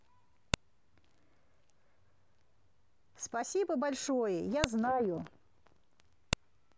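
At 0.54 s a sharp, loud click cuts into the speech. It returns at 4.64 s and again at 6.33 s. Each is a file header played as audio. Separate WAV pieces were joined without stripping their headers. The header bytes then play back as if they were samples. Each burst lasts only a few milliseconds. It snaps out regardless of the speech around it, marking where one piece ends and the next begins.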